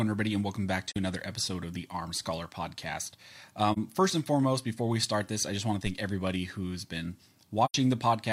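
At 0.88 s, the speech drops into a short, soft-edged hole of about 43 ms. This is AAC frame loss with muting. The gap fits a single missing frame whose spectrum the decoder set to zero. The overlapping windows fade it out and back in. The same hole recurs at 3.72 s, just before "first and foremost before".

At 5.86 s, between "I just want to" and "everybody who's been", a phantom power thump lands. A supply step on the live input passes through the coupling capacitors. It is heard as a low thud that decays within about 12 ms.

At 7.65 s, right after "everybody who's been", a longer muted gap of about 85 ms opens. That length points to two consecutive lost frames.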